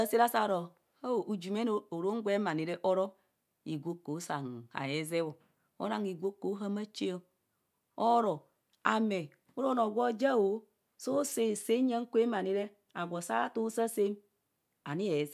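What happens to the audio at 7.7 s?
Nothing goes wrong at 7.7 s; the speech runs through that moment intact, with no dropout, click or other fault to be heard.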